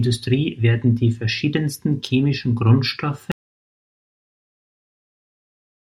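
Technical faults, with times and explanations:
3.32 s to the end, audio dropout to silence: the speech stops abruptly mid-flow and never returns, and the remainder is silence with no room tone or hiss. The likely cause is that the input was lost, through a disconnected device, a broken link or an accidental mute, while recording carried on writing silence. On the waveform the trace collapses to a flat line; the spectrogram goes dark across all frequencies from that point.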